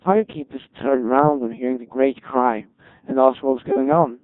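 From the first moment to the end, the speech carries the robotic, buzzy character of the Codec 2 vocoder, and the damage is heavy. Instead of preserving the waveform, the decoder rebuilds each voice from sine waves guided only by pitch, voicing, energy and a coarse spectral envelope, at a density that fits the 1.6 kbit/s mode. Unlike a low-bitrate waveform codec, which smears and warbles, this sounds synthetic and evenly mechanical.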